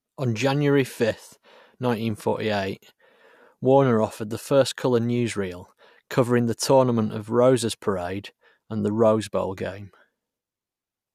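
Nothing in the speech recording stood out as a technical problem on listening.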